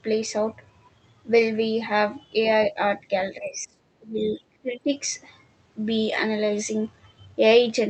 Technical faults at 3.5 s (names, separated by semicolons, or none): speech suppressed in double talk